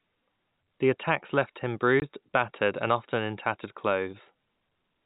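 At 2.0 s, right after "attacks left him", a single 20 ms hole cuts the speech. This is packet loss filled with silence: one packet went missing and the receiver played silence in its place. The gap has hard edges, unlike concealment, which would smear or repeat sound across the gap.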